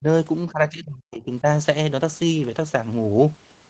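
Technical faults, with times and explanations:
0.0–0.06 s and 0.51–1.47 s, speech suppressed in double talk: the speech level suddenly falls, by about 30 dB in the brief opening dip and about 40 dB at its deepest in the second, which lasts roughly a second. This is likely an echo canceller that could not tell the near talker from loudspeaker echo while both sides spoke at once, so it suppressed everything. The muffled band-limited sound of the Opus call path runs through both dips.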